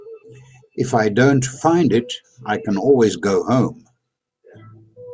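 Listening to the speech in this recording, nothing technical stood out.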